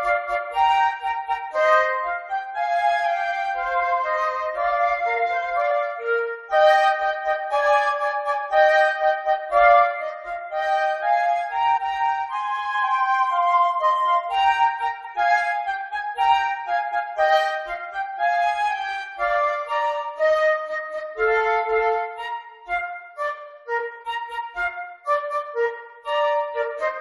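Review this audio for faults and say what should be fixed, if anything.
Four quick blips from damaged data in a compressed stream, at 5.70 s, 11.76 to 11.79 s, 15.04 s and 24.05 s, where the decoder loses sync. Re-fetch or re-encode from a clean source, and checksum files in transit.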